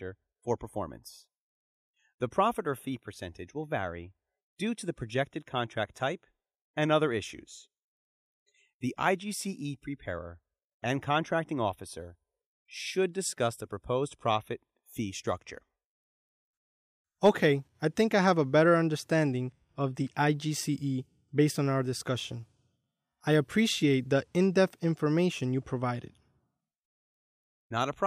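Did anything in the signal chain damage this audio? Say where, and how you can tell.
No, the signal carries no audible damage from any stage of the chain, from capture through to playback.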